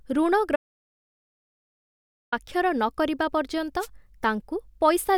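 An audio dropout to silence runs from 0.56 s to 2.32 s in this speech recording, about 1.76 s where the sound stops mid-flow and the gap is digital silence with no room tone underneath. The most likely cause is a lost input, such as a disconnected device, a failed link or an accidental mute, while the recorder kept writing zeros, so whatever was spoken in that stretch is missing. A wireless microphone noise hit follows from 3.79 s to 3.88 s, a brief swish of static lasting about 85 ms. The radio signal from an analogue FM microphone faded as reflected paths cancelled at the receiver, and receiver noise rose and broke through over the voice.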